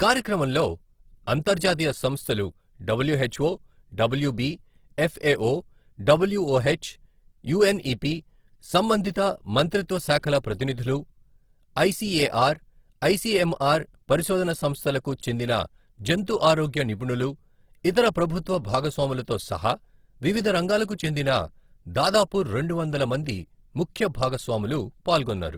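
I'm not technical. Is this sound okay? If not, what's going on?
No. Throughout, the speech sounds rough, grainy and noisy, most likely from Opus compression squeezing it hard and filling gaps with noise-like texture.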